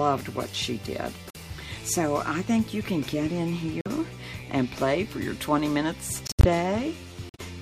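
The audio cuts to dead silence four times, each gap opening abruptly and then resuming: 1.30 to 1.37 s, 3.81 to 3.87 s, 6.27 to 6.45 s, and 7.29 to 7.40 s. These are corrupt frames muted. Damaged compressed frames were rejected by the decoder, and the player substituted silence for each one. The short gaps suggest a couple of lost frames, and the longer ones a run of several. Timing stays intact around every hole.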